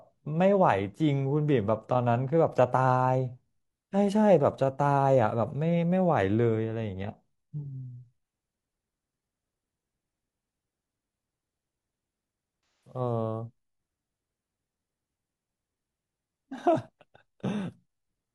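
At 12.66 s the speech breaks into a smeared, noisy, phasey patch until 13.0 s. This is AAC frame loss with concealment. About 0.21 s of data went missing, which fits several dropped frames. The decoder filled the gap by reusing the last good spectrum.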